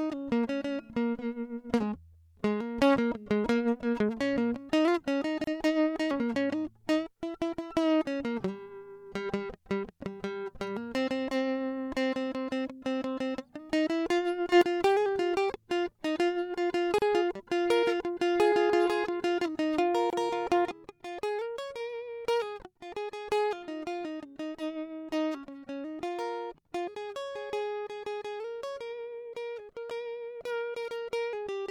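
This music clip has brief holes of silence at 5.44 s (about 33 ms), 16.98 s (about 35 ms) and 20.10 s (about 26 ms), each with smeared edges before the music resumes where it stopped. These are gaps at joins of encoded pieces, where separately encoded segments were spliced without trimming each run's start delay and padded final frame. At 14.52 s the level leaps up by about 10 dB for roughly 0.09 s, and from 20.71 s to the end it drops abruptly by about 7 dB. In both cases the music and background noise move together, which is most likely a sudden gain jump from a digital gain change applied instantly without a ramp.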